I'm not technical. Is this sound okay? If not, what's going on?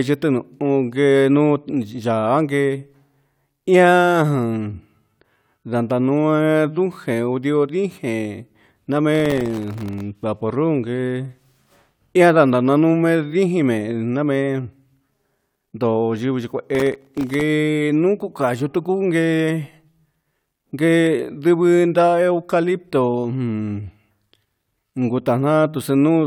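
No. From 9.15 to 10.01 s and again from 16.75 to 17.41 s there's processor overload crackle: the computer fell behind, dropping many tiny, sub-millisecond slivers of sound as silence. Unlike a single click, it's a gritty burst that stops once the load eases.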